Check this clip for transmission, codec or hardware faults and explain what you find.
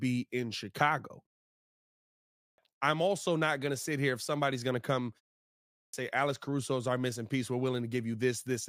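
There are two clipped starts after a pause. At 2.18 s, after a 0.99 s pause, about 0.40 s is lost before "I'm also not going". At 5.51 s, after a 0.39 s pause following "somebody's going to come", about 0.42 s goes. The output path sleeps during silence and needs time to wake, so the speech begins abruptly without its opening sounds.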